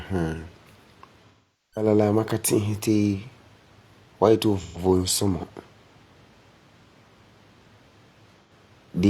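Three bursts of AAC frame loss with concealment occur, where the decoder lost frames and filled the gaps by reusing the last good spectrum. The longest, from 1.29 to 1.87 s, covers about 430 ms of missing audio, which fits roughly ten lost frames, and the speech there decays to a very faint noise floor before fading back in. Shorter gaps at 4.59 to 4.78 s (about 128 ms) and 8.42 to 8.52 s (about 85 ms) leave brief, phasey patches.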